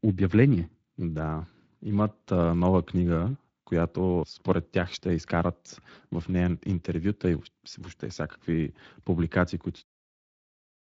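The whole clip has passed through the Speex codec at a rate that fits around 20 kbps. This CELP coder has too few bits to rebuild the speech excitation faithfully, so the speech sounds plainly noisy and hoarse throughout, up to the smooth fade-out in the final second.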